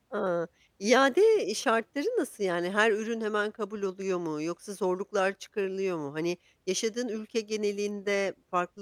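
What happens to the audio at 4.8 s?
Nothing goes wrong at 4.8 s: the speech runs through that moment intact, with no dropout, click, distortion or other fault.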